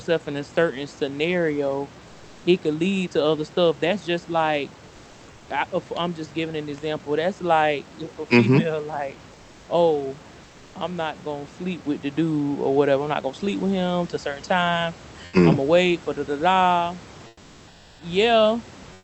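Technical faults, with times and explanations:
9.31–9.67 s, 10.43–10.75 s, 17.27–17.99 s, 18.95–19.04 s: comfort noise in place of the background. In pauses after "female like" and "for da da da", the room hiss turns flat and about 3 to 5 dB quieter, likely from Opus discontinuous transmission.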